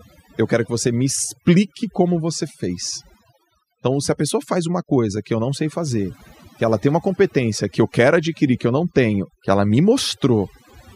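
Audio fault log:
Throughout: overdone noise removal. Between phrases the background drops and breaks up into twinkling, warbling specks, and the speech itself has its softer edges hollowed out. A noise reduction process was driven too hard, pulling individual frequency bands far down or cutting them entirely whenever their level sat close to its noise estimate. Quiet components of the speech fell under that line and were removed along with the noise, leaving scattered isolated bands behind.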